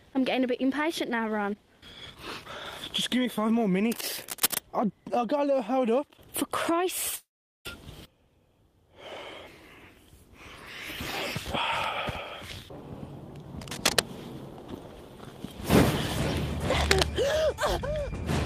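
From 3.92 to 4.61 s a dense, uneven scratching and rustling sits over the audio, at about the same level as the sound itself. The same cable scratch noise returns from 13.61 to 14.01 s and from 16.76 to 17.04 s. Each burst is likely a worn cable, connector or control carrying a DC voltage being moved, so that its contact resistance jumps about rapidly and sprays irregular noise into the signal.

Between 7.15 and 7.67 s the audio breaks off. The last sound carries on briefly as a fading buzz or hiss, then drops to silence or a low steady noise for about 0.41 s. When the audio returns, it has skipped ahead, with half a second never heard. This long network dropout is likely a stretch in which no audio reached the receiver, so the player improvised a fill for the gap before picking up again further along.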